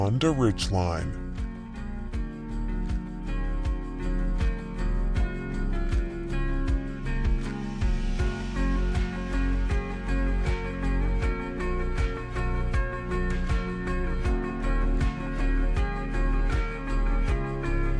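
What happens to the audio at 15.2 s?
At 15.2 s, as throughout, a wrong sample rate slows playback to about 0.69 times speed (fitting 32 kHz audio played at 22 kHz), dropping pitch about 6.5 semitones, so everything sounds low and dragged.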